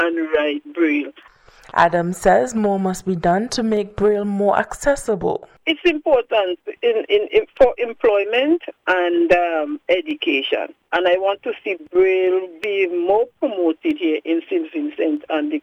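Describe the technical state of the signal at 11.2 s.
Clock drift buffer slips, 1.23 to 15.17 s: clicks every 1.27 s, likely from two device clocks about 150 ppm apart dropping or repeating a few samples.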